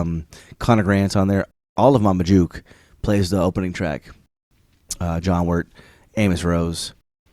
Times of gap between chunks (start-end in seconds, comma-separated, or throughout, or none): 1.51-1.76, 4.26-4.51, 7.01-7.26